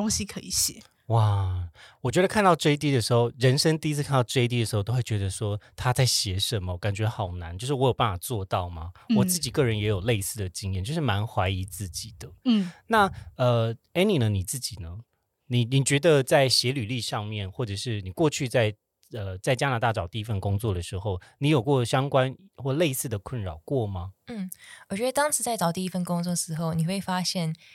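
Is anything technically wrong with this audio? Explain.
No, nothing technically wrong can be heard in this speech recording; the signal stays intact and consistent throughout, with no audible faults.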